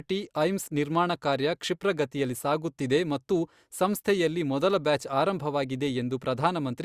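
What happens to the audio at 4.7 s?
Nothing goes wrong at 4.7 s: the speech continues cleanly there, with no dropout, click or distortion.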